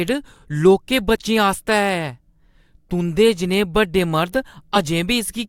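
Speech with two spots where the audio jumps ahead: at 1.15 s, losing about one 20 ms frame, and from 4.75 to 4.79 s, losing roughly two frames. These are compressed frames skipped.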